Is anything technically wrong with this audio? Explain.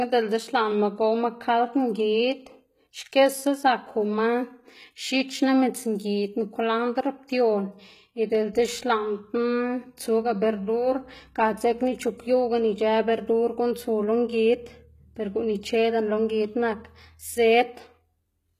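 Yes. Throughout the speech there is plainly audible damage from what is likely HE-AAC compression at a very low bitrate, around 20 kbps. Only the lower spectrum is truly coded; the treble is rebuilt by copying lower bands upward, so its harmonics don't align with the real ones. S sounds come out gritty and lispy with a metallic sheen. A spectrogram shows repeated, blocky treble patterns above the crossover and a hard ceiling with nothing above 14.9 kHz.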